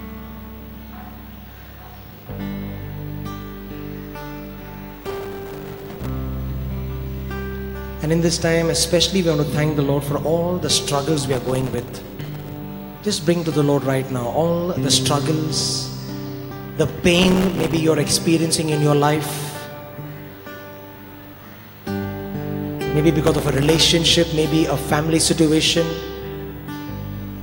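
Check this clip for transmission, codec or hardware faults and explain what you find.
Processor overload crackle occurs four times: 5.01 to 6.09 s, 11.33 to 12.56 s, 17.19 to 17.77 s and 23.26 to 23.86 s. The processor repeatedly fails to fill very short buffers, around 1.5 ms each, before they are due. Each miss drops in a sliver of silence with hard edges. Dozens to over a hundred of these gaps in quick succession produce a gritty, tearing crackle over the sound, which stops as each overload ends.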